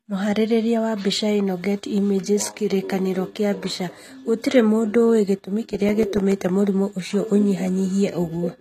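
From the start, the speech has nothing above 14.6 kHz, and there's a mix of smeared, swirly high-end texture with a grainier, watery layer on top. That's likely transcoding between lossy codecs, which fits a low-rate HE-AAC pass re-encoded to MP3 around 64 kbit/s. The second encoder spends its bits on the first one's artefacts, so both sets stay audible.

Then, right after "mũndũ ũĩ gĩtũmi", from 5.75 to 6.32 s, there are five regular CD scratch ticks of uneven strength before "mũrimũ ũcio". The longest is a tiny click of roughly 4 ms, where a blemish beat the error correction on each disc turn and the player patched over the lost samples.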